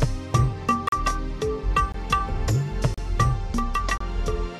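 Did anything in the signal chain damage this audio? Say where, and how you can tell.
Yes, a gap between stream segments at playback, with hard-edged silent holes at 0.88, 1.92, 2.94 and 3.98 s, about 22 to 39 ms each. The holes recur roughly once a second, matching 1 s segment boundaries whose timestamps leave small gaps. On a waveform they are flat-line dropouts, and on a spectrogram full-height blank vertical stripes.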